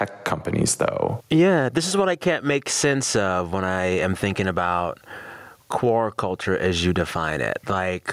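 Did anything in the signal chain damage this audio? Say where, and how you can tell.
Yes. Gain pumping runs through the whole speech clip: the level keeps being pulled down and released, with a swing of around 15 dB, so loud and soft passages sit closer together than they should and the sound comes across squashed. The likely cause is at the input stage, where the gain was set far too high for the microphone and a fast limiter or compressor clamps it on each loud sound, then lets it recover.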